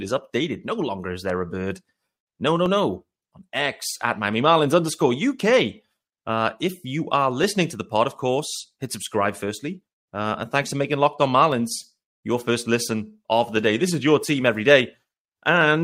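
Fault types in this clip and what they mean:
Clock drift buffer slips: A short click or pop recurs every 0.68 s through the speech, from 0.61 s to 15.6 s, about twenty in all. The spacing never changes. This is likely two devices running on separate clocks that disagree by around 500 ppm. The buffer between them drifts until a small block is dropped or repeated. The clicks fit slips of roughly 15 samples each.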